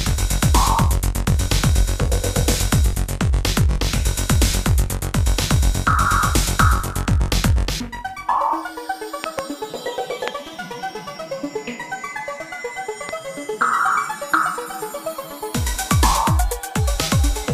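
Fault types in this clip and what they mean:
Loud pop: sharp pops jump well above the sound, a double at 9.2 s then singles at 10.3 and 13.1 s, likely a voltage glitch.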